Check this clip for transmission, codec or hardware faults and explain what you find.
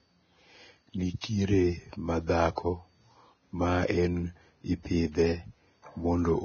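The speech carries heavy lossy-codec damage throughout, plus two brief pre-echoes.

Vorbis compression, throughout: the damage is most likely from this codec at a very low rate, around 18 kbps. Nothing survives above 6.5 kHz, and the remaining treble is quantised so coarsely that its detail becomes grainy hiss, roughening the speech.

Pre-echo, 1.21 to 1.24 s and 2.56 to 2.58 s: the codec spreads its quantisation noise across a whole transform block, so a sharp onset late in a block pulls noise ahead of itself. A short hiss of 27 ms, then 20 ms, precedes each attack.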